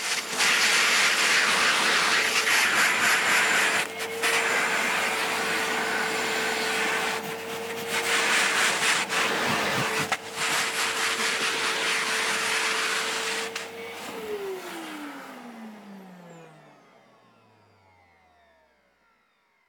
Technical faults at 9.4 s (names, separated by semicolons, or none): none